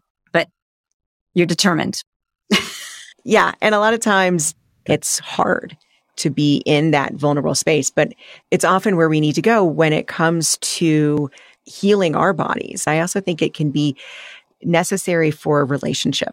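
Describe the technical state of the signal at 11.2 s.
At 11.18 s the speech jumps ahead by a few milliseconds with no gap, likely a dropped buffer (overrun): samples were overwritten before being read.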